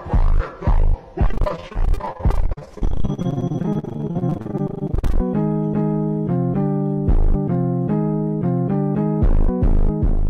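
Repeated packet loss (robotic sound) runs from 1.27 s to 5.19 s. Throughout that stretch, chunks of the stream keep arriving late or not at all, and each hole is bridged by extending the sound that came just before it. The holes are brief, the longest about 43 ms, but they come in rapid succession, so roughly two fifths of the span is patched-over material. The result is choppy audio with pieces missing.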